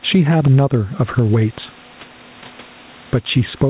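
Gain pumping runs through the whole speech clip. The background noise sits about 35 dB under the speech, and the gain swings by around 10 dB. The likely cause is input gain set far too high, with a fast limiter or compressor clamping down on every loud syllable and releasing in the gaps. Loud and quiet passages end up squeezed together, and the band-limited sound, with nothing above 4 kHz as the call path suggests, has a flattened, squashed quality.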